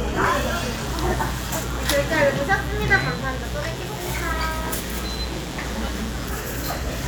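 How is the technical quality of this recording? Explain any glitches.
The recording carries one clear fault. Mains buzz runs from 0.73 to 6.29 s: sharp switching spikes at twice the 60 Hz mains rate, rich in harmonics, give a steady, raspy buzz sitting fairly loud under the sound.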